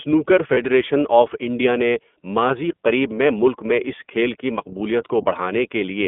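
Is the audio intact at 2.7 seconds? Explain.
No, at 2.7 s the speech is still under the iLBC codec that runs the whole clip. Nothing above about 3.5 kHz or below 200 Hz survives, and each frame's excitation is coded on its own, likely in 30 ms frames at 13.33 kbps, so it sounds plainly rough and synthetic.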